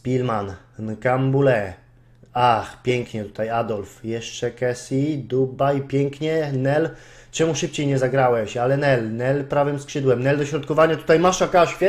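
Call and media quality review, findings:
No audible faults in the signal path; levels, continuity and timing hold steady across the whole recording, with no dropouts, distortion or timing irregularities heard.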